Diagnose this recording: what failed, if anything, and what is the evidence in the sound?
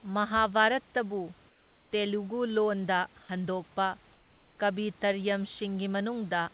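In the call processing stage, discontinuous transmission likely stopped sending during pauses, leaving the receiver to generate comfort noise in place of the background. The room noise sits about 33 dB below the speech, and the band ends at 4 kHz, which fits a G.711 mu-law path at 64 kbps. At 1.49–1.91 s (420 ms) and 4.13–4.58 s (450 ms), that real background gives way to a steady, featureless hiss about 3 dB quieter, then returns when speech resumes.

The sender's voice detector misjudged a quiet sound, likely mistaking it for background, and stopped sending. From 3.23 to 3.29 s, 60 ms of audio is replaced by synthetic noise, and roughly 30 ms of sound is lost. It is heard as a brief hole where the sound dips into flat noise before the detector triggers again and normal transmission comes back.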